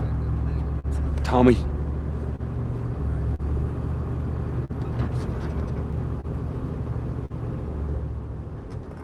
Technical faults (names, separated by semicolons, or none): clock drift between sender and receiver; short stall from a late packet